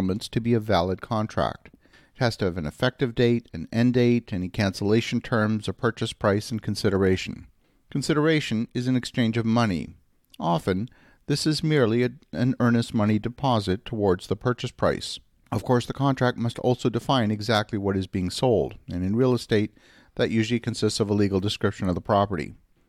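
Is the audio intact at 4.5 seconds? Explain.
Yes, the speech at 4.5 seconds plays through intact, with no dropout, click, distortion or other fault audible at that point.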